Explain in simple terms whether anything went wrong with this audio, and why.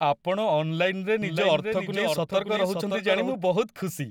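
Something did go wrong here: from about 1.22 s to 3.34 s there's a doubled audio track. The same speech plays twice, with a second copy trailing roughly half a second behind and sitting a bit quieter than the original. It's a clean copy with no room echo or fading tail, and it snaps in and out abruptly at those two times. The likely cause is the sound being picked up a second time through a slower route, or an edit leaving two out-of-step copies stacked together.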